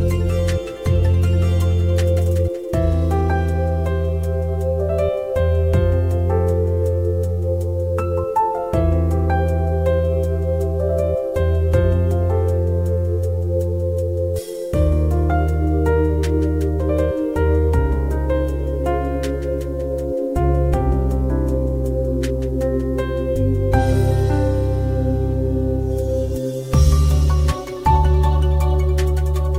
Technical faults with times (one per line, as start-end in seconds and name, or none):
0.00-29.58 low bit depth without dither